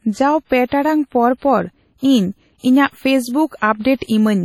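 WMA compression throughout: the speech rings and washes with breathing hiss and nothing above 18.6 kHz, likely a heavily quantised transform codec at around 32 kbps.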